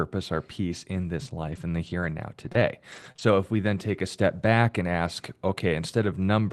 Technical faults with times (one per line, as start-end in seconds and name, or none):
1.27-3.20 scattered short gaps